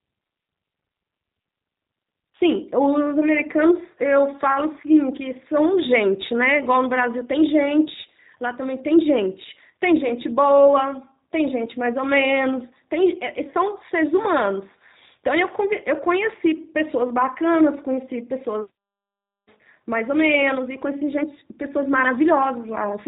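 Speech coded throughout with the G.729 codec: nothing above 3.8 kHz survives, and the plainly rough, synthetic texture fits an 8 kbit/s pulse-based VoIP coder.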